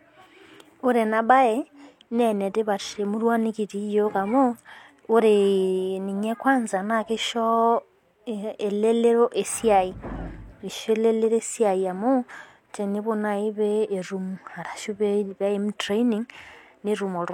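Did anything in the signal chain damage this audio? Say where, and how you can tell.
No, nothing in the chain.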